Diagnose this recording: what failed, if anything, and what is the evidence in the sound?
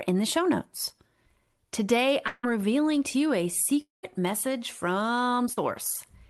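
At 2.27 to 2.45 s and 3.81 to 4.05 s, speech smears into a fading buzz, then silence: likely a long network dropout, with the receiver extending the last sound.

A brief smear at 5.53 to 5.59 s is short concealed packet loss: about 40 ms lost on the network, bridged by the decoder continuing the sound.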